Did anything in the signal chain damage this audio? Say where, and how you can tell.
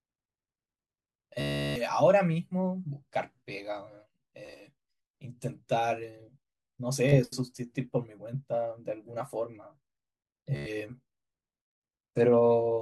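Yes. Bluetooth stutter on the wireless link: packets dropped and the receiver replayed its last short slice, so speech buzzes at 1.41–1.82 s, 4.46–4.61 s, 7.09–7.18 s and 10.56–10.71 s, then resumes further on, about 350 ms lost at the first.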